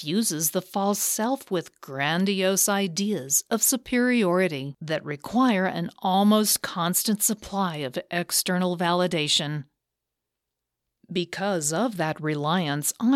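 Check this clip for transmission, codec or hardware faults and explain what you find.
Checking this clip turns up no faults to explain.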